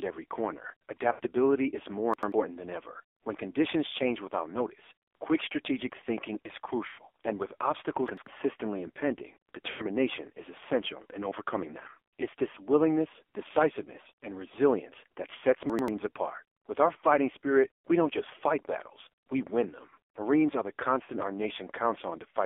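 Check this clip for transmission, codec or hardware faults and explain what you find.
Four kinds of fault are present: heavy narrowband mobile codec damage throughout, three runs of lost AMR speech frames, three chunks out of order, and a loudspeaker feedback squeal at the end.

AMR narrowband mobile codec, whole clip: The speech was carried through AMR-NB at a very low bit rate, which fits roughly 5.9 kbps, over a line passing only about 300 Hz to 3.5 kHz. At so few bits, the vocal-tract model and sparse pulse excitation cannot follow the speech closely. The result is a thin, boxy, telephone-band sound with a buzzy, synthetic edge to every voiced sound.

Lost AMR speech frames, at 1.12 to 1.21 s, 6.88 to 7.01 s, and 9.70 to 9.85 s: Corrupted radio frames were rejected, and the decoder filled each gap by repeating its last good pitch and spectral settings at falling gain. The gaps last 80 ms, which fits four lost 20 ms frames, then 100 ms twice. 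Each is heard as a smeared, stretched sound sinking toward silence, with a rough, weak return, just before "and with" and just before "is essential in overcoming".

Chunks out of order, at 2.14 to 2.32 s, 8.08 to 8.27 s, and 15.70 to 15.88 s: A block of audio about 93 ms long was delivered one block late, so it plays after the block that should follow it. Nothing is missing, but each place has three hard joins. It is heard as a brief jumbled stutter, including right after "and with".

Loudspeaker feedback squeal, from 20.33 s to the end: The microphone picked up its own loudspeaker, and at 4 kHz the loop gain went above one. That frequency builds on itself for about two seconds into a steady whistle. By the end it stands roughly 5 dB above the speech.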